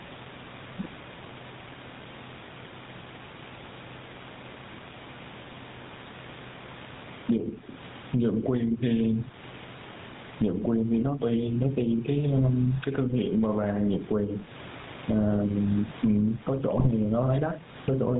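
Buzzy, gravelly speech with a constantly breathing level: loud and quiet syllables sit squashed close together, with the gain swinging around 15 dB. That pumping is the sound of gain pumping, and the likely cause is a microphone gain set far too high, with a fast limiter or compressor clamping down on each loud sound and letting go in the gaps. Throughout, the voice also has a rough, reedy graininess and nothing above 4 kHz, so sibilants are dull. That character fits the GSM full-rate codec at 13 kbps. It rebuilds speech from a vocal-tract model excited by sparse, regularly spaced pulses, and it discards much of the fine detail of the excitation and all of the upper band, which leaves this plainly audible codec damage. On top of that come GSM bit errors, where corrupted parameters from a weak radio link reach the decoder and distort the spectrum or spike the level frame after frame while the bad patch lasts. 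They cause gargling squawks and pops from 3.54 to 3.67 s, a brief blip at 14.27 to 14.31 s, and the longest burst from 16.70 to 16.88 s.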